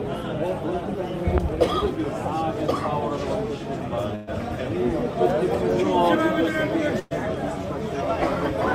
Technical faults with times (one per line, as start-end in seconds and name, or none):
4.15-4.29 burst of packet loss
6.99-7.12 burst of packet loss